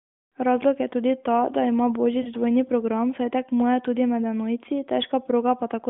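At 2.22 to 2.29 s, right after "tudi ta da ima", the AMR decoder lost speech frames: corrupted data failed its checksum, so the decoder filled the gap by reusing the last good pitch and vocal tract settings at falling gain. The 40 ms gap fits two lost 20 ms frames. It sounds like a short smeared, warbling dip in the narrowband mobile speech before "dvojni program saj tekmuje" resumes, briefly weaker and rougher.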